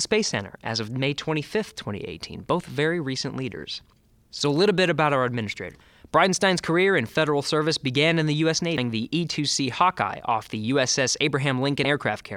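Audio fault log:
5.74 s, 8.77 s, 11.84 s: damaged data in a compressed stream. Brief glitches cut into the speech where corrupted frames make the decoder lose sync until the next frame header.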